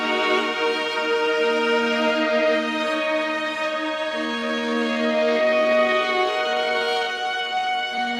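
A music clip whose pace suddenly drops at 4.21 s and stays slow through the end at 8.19 s, running at about 0.64 times its original speed while the pitch holds steady, so the sound drags. This time-stretched section likely comes from software lengthening the passage by repeating short slices.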